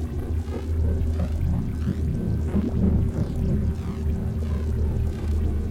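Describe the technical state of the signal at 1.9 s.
At 1.9 s the audio is intact, with no technical fault present at that moment.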